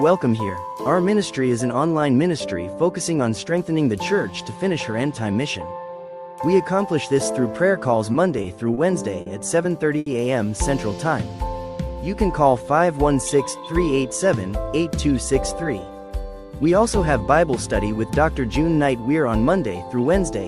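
A run of short stalls from late packets hits the audio at 8.12, 8.42, 8.74, 9.21 and 9.98 s. Each holds the sound for 20, 20, 30, 50 and then 80 ms, adding delay while nothing is lost. A jitter buffer speed-up follows from 13.08 to 13.93 s. The audio plays about 6% fast at unchanged pitch, trimming roughly 70 ms of built-up delay.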